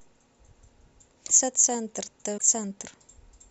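At 1.27 to 1.31 s and again at 2.37 to 2.42 s, the speech skips ahead with a brief garbled glitch, likely a broken MP3 bit reservoir, where frames lost their borrowed data.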